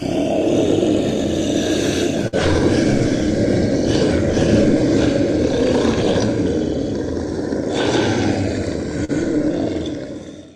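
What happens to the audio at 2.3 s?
A burst of packet loss runs from 2.28 to 2.35 s. The receiver extends the last sound for about 48 ms, fading it, then resumes with roughly 40 ms of audio missing.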